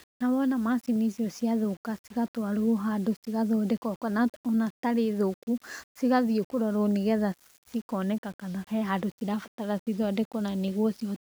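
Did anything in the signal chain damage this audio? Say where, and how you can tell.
Yes. Throughout the speech there is a grainy, signal-following distortion typical of low bit depth without dither, likely introduced at a sample-format conversion stage where the audio was rounded to about 7 bits. The grit rises and falls with the speech rather than sitting as a steady hiss, and quieter passages turn rough or sputter between adjacent steps. The rounding error sits only around 30 dB below the signal, and without dither it stays correlated with the waveform instead of spreading into neutral noise.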